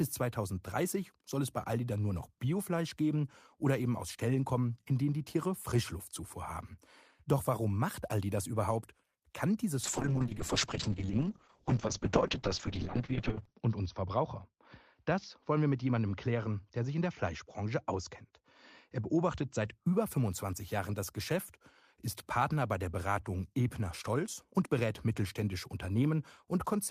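From 9.84 s to 19.79 s a call bitrate drop coarsens the speech. The encoder loses most of its bits, consistent with a fall from 32 kbps to 6 kbps. Bandwidth shrinks from 20 kHz to 6 kHz, sounding muffled and watery, worst for 3.7 s.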